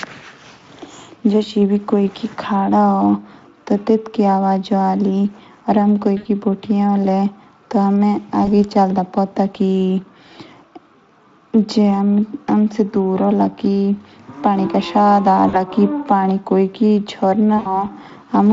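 VoIP packet loss concealed by the speech codec occurs at 6.17–6.27 s, 8.45–8.48 s, 15.49–15.63 s and 17.57–17.88 s. The light Speex decoder bridges each dropout, from about 20 to 80 ms, by repeating its last pitch and filter at falling gain. The speech is stretched into a buzzy tone or coloured noise that fades, then recovers weakly.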